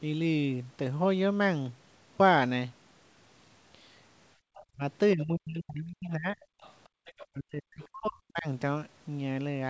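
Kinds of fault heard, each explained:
Background gated by the echo canceller: The room sound between words briefly collapses, by about 27 dB at 4.36 to 4.45 s and about 30 dB at 6.89 to 7.05 s, then returns. The canceller is clamping the microphone while the far end plays out. Unlike double-talk suppression, what vanishes here is the ambient bed, not the talker's own speech, and each dip lasts only a tenth of a second or so.
Other side's voice leaking through: A faint second voice, about 25 dB under the main talker, surfaces at 4.55 to 4.64 s, across 6.41 to 7.27 s, and as a short scrap at 7.82 s. This is likely loudspeaker sound that the echo canceller failed to remove from the microphone. It differs from gating or suppression because something is added to the clip rather than taken away. The intrusion is a separate, quieter voice, not a change in the main talker.
Speech suppressed in double talk: The talker's own speech sinks while the far end is active, by about 30 dB at 4.73 to 4.82 s and by about 40 dB across 5.16 to 6.38 s and 7.33 to 8.47 s, each long stretch lasting roughly a second. 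The cause is likely the canceller mistaking overlapping speech for echo and turning everything down. Gating only empties the background, whereas here the voice itself fades or breaks up.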